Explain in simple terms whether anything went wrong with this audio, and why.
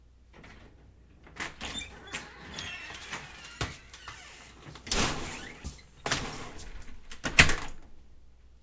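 Nothing went wrong here: the sounds in the recording come through steadily, with no technical faults to be heard anywhere in the signal.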